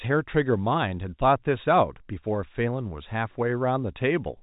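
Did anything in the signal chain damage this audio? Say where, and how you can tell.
No, nothing in the chain has damaged this speech; it simply sounds like an ordinary G.711 phone call, with the sound topping out around 3.8 kHz as you'd expect from that telephone coding.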